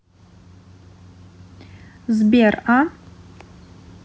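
Listening to this speech recording, nothing technical stood out as a problem.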